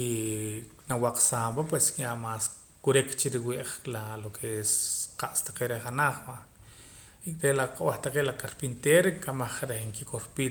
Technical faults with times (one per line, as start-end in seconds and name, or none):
none